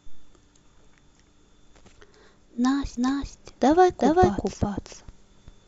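From 2.97 s to the end, a doubled audio track appears. A second full-band copy of the speech trails about 0.4 s behind, roughly as loud as the original. It starts abruptly, with no decay or room colour. A slower capture path is the likely cause.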